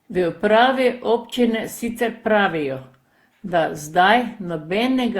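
Throughout the speech, the signal was likely decoded and re-encoded about ten times through a lossy codec, pointing to Opus near 64 kbit/s, each pass requantising on a shifted frame grid. This generation loss leaves swirly, smeared, hollow sound with blurred attacks.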